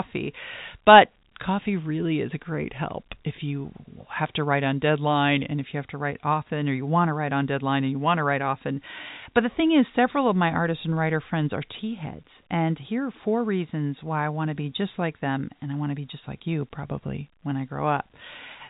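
No technical faults can be heard in this speech.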